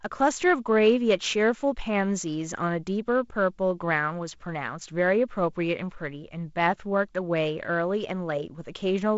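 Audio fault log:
No faults heard.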